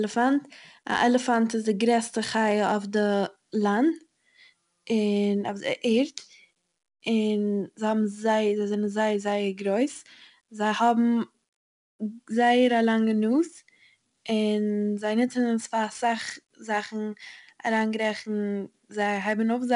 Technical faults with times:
0.00-19.75 4-bit ADPCM compression

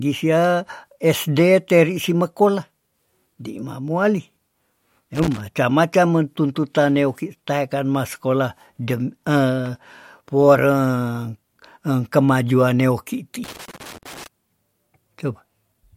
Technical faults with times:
5.15-5.40 loose connector crackle
13.44-14.27 loose connector crackle

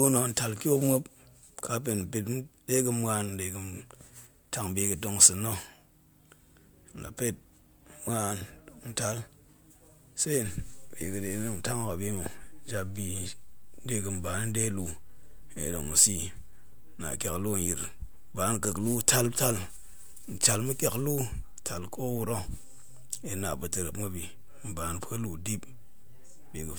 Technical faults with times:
0.00-26.79 generation loss

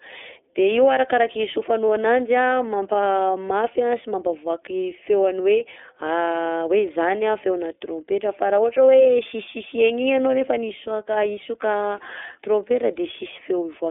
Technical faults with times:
0.00-13.91 iLBC codec
1.88 lost iLBC frames
9.03-9.06 lost iLBC frames

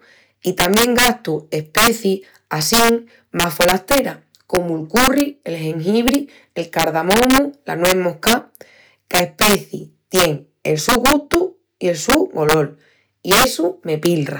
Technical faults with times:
0.00-14.39 integer overflow

